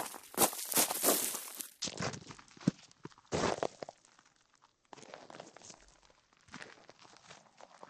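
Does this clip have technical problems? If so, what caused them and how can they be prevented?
Yes. From 1.82 s to the end, the sound has a section at the wrong speed: it plays at 0.53 times its original rate, dropping about ten semitones and stretching out, likely from a player or editor running on the wrong clock. Unlike a pure pitch shift, timing slows along with pitch. Check that playback and editing sample rates match the recording before export.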